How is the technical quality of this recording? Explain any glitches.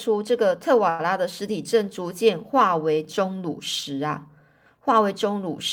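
One glitch stands out, a short stall from a late packet between about 0.89 and 1.01 s. Right there the speech briefly hangs: a sound is held unnaturally long, with a faint buzzy, slightly dipped quality, before the talker carries on exactly where they left off. A packet failed to arrive on time, so the jitter buffer ran dry and the receiver stretched the last audio for about 97 ms while it waited. Nothing is lost, but everything afterward plays about 97 ms later.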